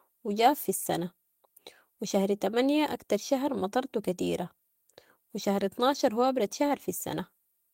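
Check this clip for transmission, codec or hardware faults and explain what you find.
Nothing stood out on listening to this speech recording.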